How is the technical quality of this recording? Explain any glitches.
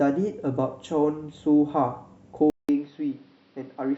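One glitch stands out. From 2.5 s to the end, the input was likely switched to a poorer device. After a gap of about 0.19 s, the speech returns a few decibels quieter, band-limited to nothing above 5.8 kHz, so it sounds duller and boxier, with a new noise floor roughly 35 dB below the signal.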